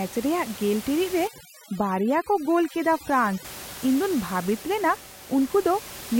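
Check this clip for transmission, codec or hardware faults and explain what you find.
Overdone noise removal affects the speech from 1.28 to 3.45 s. A noise reduction stage set too aggressively pushes individual frequency bands down or off wherever they sit near its noise estimate, taking quiet parts of the voice too, so the background drops and breaks up into twinkling specks. Room noise, about 16 dB below the speech, is part of the recording rather than a system fault.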